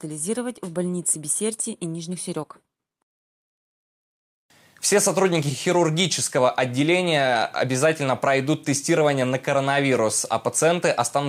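Throughout the clip there is clock drift between sender and receiver: the sending device's audio clock runs ahead of the receiving one by roughly four percent. Because samples arrive faster than they are played out, the jitter buffer steadily overfills, and the receiver has no choice but to keep discarding material to hold its latency in check. The result is an undercurrent of small, irregular timing disturbances across the whole recording rather than one obvious glitch.

From about 0.07 s to 11.24 s, that pressure shows up as repeated timing corrections. The receiver trims short slices out of the stream again and again, always removing rather than repeating, so the audio is effectively pushed through at about 104% of its natural rate. The cuts are unevenly spaced and each one is tiny, so they come across as faint hiccups and a slightly hurried, unsteady pace rather than distinct dropouts.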